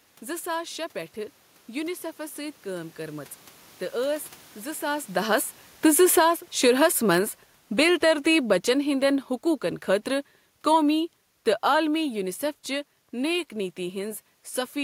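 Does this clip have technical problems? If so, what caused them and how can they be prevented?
Yes, there's an automatic gain falling problem. From 4.82 s to 12.34 s the level slides down by about 13 dB. The talker shifts position around the 4.5 s mark, and from 4.82 s the automatic gain control, finding the input too loud or its background noise too strong, slowly winds its gain back. The room noise sinks right along with the speech, which tells you it's the gain stage moving and not the talker. To prevent it, switch off AGC and set a fixed input gain with some headroom, or slow its attack so brief jumps in level don't pull everything down.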